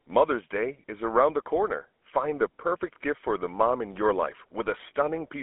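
Throughout the speech, GSM full-rate codec damage is plainly audible: the sound is rebuilt from a vocal-tract model driven by spaced pulses, which fits a 13 kbps coder and gives a buzzy, gravelly roughness. It is band-limited to 250 Hz–3.4 kHz. On a spectrogram nothing appears above 3.8 kHz, and the harmonics look grainy and smeared.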